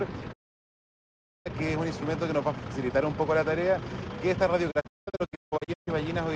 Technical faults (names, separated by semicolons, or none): digital broadcast dropout